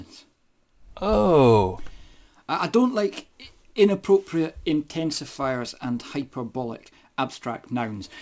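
Aliasing runs through the whole clip. Content that originally sat above 8 kHz has been mirrored back down below that point, which fits a sample-rate drop from 48 kHz to 16 kHz made without an anti-aliasing filter beforehand. The folded components land at unrelated frequencies, about 30 dB below the main signal, giving the high end a gritty, metallic edge, and the spectrum stays dense right up to the 8 kHz band limit instead of rolling off.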